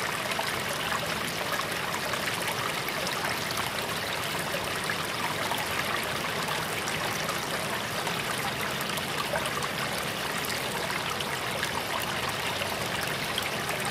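Clock drift buffer slips run from 0.35 s to 13.71 s, a click or pop roughly every 0.89 s, about fifteen in all, wherever there is signal. The likely cause is two devices running on separate clocks that disagree by a few hundred parts per million, so the buffer between them slowly fills or drains until about fifteen samples are dropped or repeated. The steady spacing points to drift rather than random dropouts.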